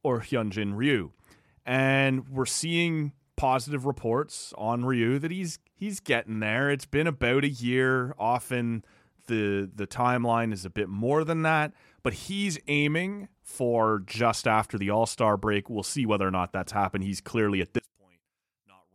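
From 17.79 s to 18.95 s, right after "clearly at", the speech collapses by about 32 dB to a faint residue, likely one channel inverted cancelling the centred voice in mono. Unlike a dropout, faint difference sound remains rather than silence.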